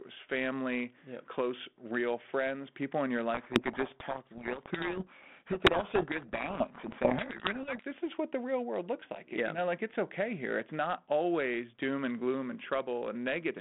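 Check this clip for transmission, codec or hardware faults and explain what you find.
There's one clear fault: a codec payload misread from 3.34 to 7.85 s. For those four and a half seconds, the speech disappears under harsh, grinding distortion. What's happening is that the two ends disagree on the bit order of the G.726 code words, so the decoder takes each code word with its bits swapped around and builds the wrong difference values from them. The adaptive predictor then chases garbage, and the speech only returns cleanly once both sides agree again. Outside that stretch, you can hear the telephone-band G.726 coding at 32 kbit/s, confined to roughly 150 Hz to 3.5 kHz with only light codec roughness.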